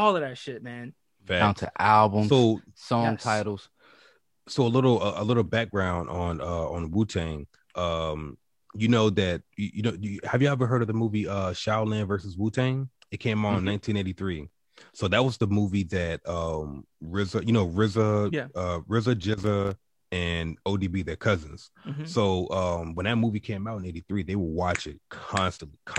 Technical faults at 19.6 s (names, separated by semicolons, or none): loose connector crackle